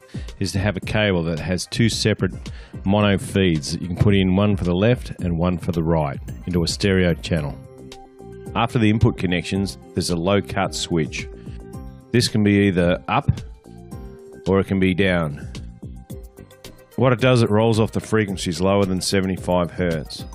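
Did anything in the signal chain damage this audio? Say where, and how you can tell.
No, nothing in the signal chain damaged this audio.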